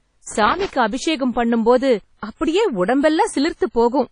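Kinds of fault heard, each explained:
WMA compression: A ringing, washy quality with hiss that rises and falls with the speech runs through the whole clip, and nothing is heard above about 10.1 kHz. This is likely low-bitrate WMA coding, fitting roughly 32 kbps, where long transform blocks smear quantisation noise and weak detail is zeroed.
loose connector crackle: An irregular burst of crackle and scratching cuts into the speech from 0.31 to 0.70 s, ending just before "அபிஷேகம் பண்ணும் போது அப்படியே". A worn or dirty contact is making and breaking rapidly, chopping the signal as it moves.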